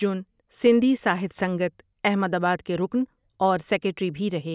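A short speech recording with no audible technical faults at any point.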